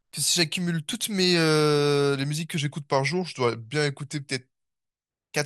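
Speech, with a drift correction step from 2.57 s to 4.85 s: playback abruptly slows by about 6.3%, dropping pitch by 113 cents, just over a semitone, then snaps back to normal. This is likely a clock-matching resampler refilling its buffer. Tape wow or flutter would wobble continuously. Here the offset holds steady, and speed and pitch shift together in a clean step down and back.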